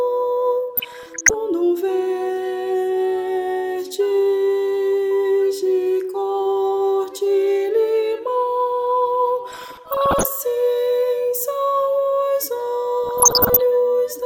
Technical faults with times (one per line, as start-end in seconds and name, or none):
0.77-1.34 DAB burbling
9.51-10.26 DAB burbling
13.04-13.59 DAB burbling